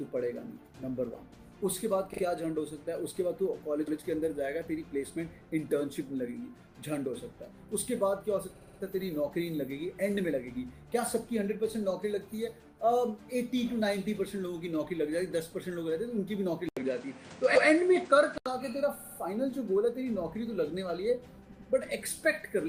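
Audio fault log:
2.13 s, 3.87 s, 8.55 s, 17.55 s, 18.99 s and 21.51 s, repeated frames: each is a brief stutter as a short slice of sound plays again. At 2.13 s a 40 ms block repeats twice more, at 3.87 s and 17.55 s a 120 ms block repeats once, at 8.55 s a 60 ms block repeats four more times, at 18.99 s a 60 ms block repeats three more times, and at 21.51 s a 100 ms block repeats twice more. Compressed frames were delivered more than once, so the decoder replayed them, and the clip grows by the repeated time.
16.69 to 18.46 s, input switched to a poorer device: after a gap of about 80 ms the sound turns dull, with nothing above 10 kHz, new background noise around 30 dB below the signal, and a level shift of roughly 5 dB. The recording likely moved mid-stream onto a lower-quality microphone or a headset's call profile, whose narrower band, different noise floor and different gain replace the original input until the switch back.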